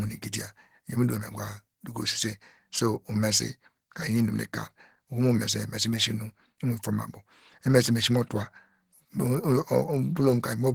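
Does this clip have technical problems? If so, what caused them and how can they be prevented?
Yes. Throughout the clip the speech has a hoarse, muffled quality with grainy roughness in the upper range, and the damage is plainly audible even though the audio still extends to about 20.2 kHz. This is likely Opus compression in its hybrid mode, where a speech coder handles the lower band and the upper band gets only coarse energy and noise filling. That starved treatment matches a bitrate of around 16 kbps. To prevent it, encode speech with Opus at 32 kbps or more so the encoder has enough bits for clean detail.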